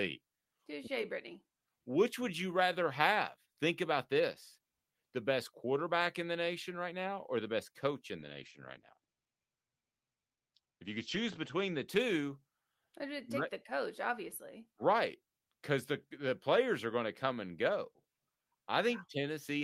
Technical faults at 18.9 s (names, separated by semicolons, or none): none